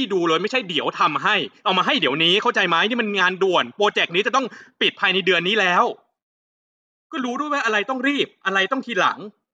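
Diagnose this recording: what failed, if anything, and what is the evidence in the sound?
Nothing failed; no fault can be heard here.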